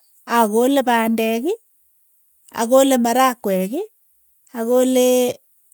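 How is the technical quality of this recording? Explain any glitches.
No glitches or technical faults can be heard here.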